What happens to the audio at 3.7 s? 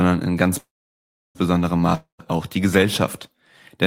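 Nothing goes wrong at 3.7 s; the audio is intact there, with no dropout, click, distortion or other fault at that moment.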